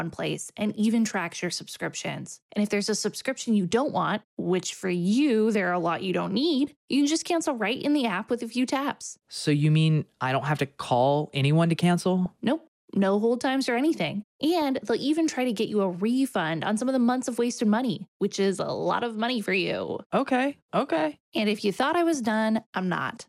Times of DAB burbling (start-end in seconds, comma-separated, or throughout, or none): 12.26-12.29, 14.62